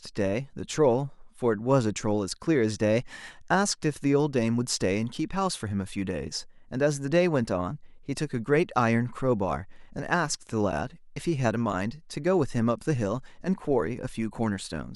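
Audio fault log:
Nothing to flag here, the speech comes through without a single fault worth logging.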